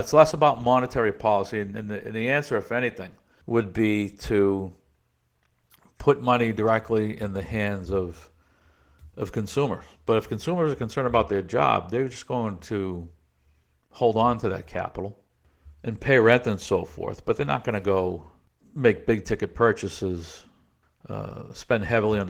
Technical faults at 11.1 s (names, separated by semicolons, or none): Opus voice compression